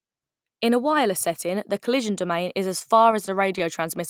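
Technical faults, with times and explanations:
2.79–3.62 s, scattered short gaps: right after "collision domain is as", about seven small dropouts are spread across this stretch of speech, the longest around 15 ms. Each hole was patched by extending the sound just before it, about 50 ms of fill in all, roughly 7% of the span. The speech stays clear but picks up brief ticks and smeared hiccups, and the stretch runs about 5 ms long.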